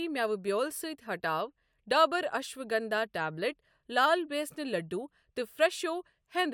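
No faults turn up anywhere in this recording of speech; it just runs along without a hitch.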